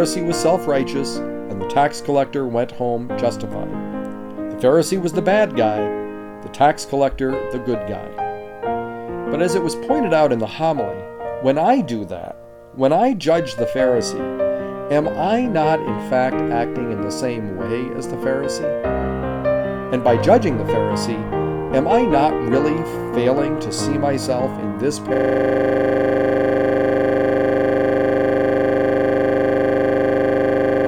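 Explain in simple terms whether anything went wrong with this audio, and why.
At 25.14 s a system hang loop begins: the computer stalled, so the sound hardware replayed one 40 ms snippet 25 times a second, making a buzzing stutter until the end.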